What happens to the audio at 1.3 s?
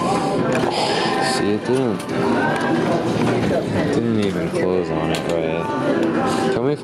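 At 1.3 s there is gain pumping, present throughout: the gain swings by around 15 dB, likely from excessive gain with a fast limiter, showing as a breathing waveform envelope.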